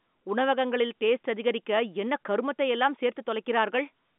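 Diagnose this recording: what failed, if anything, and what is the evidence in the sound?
Nothing stood out on listening; the telephone-band speech comes across as expected for a line of that kind, with no event that points to a failure at any stage.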